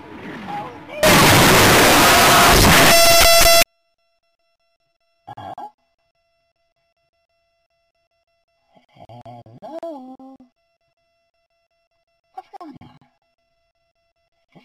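From 1.03 s to about 3.63 s the audio turns into a wall of very loud, harsh distortion, and even the quiet stretches come through as loud as everything else. That's likely a signed and unsigned mix-up: the samples, which fits 16-bit data, get read with the wrong sign convention, so the top bit flips and every zero crossing lurches across the full range. Near-silence ends up sitting right at the extremes instead of the middle.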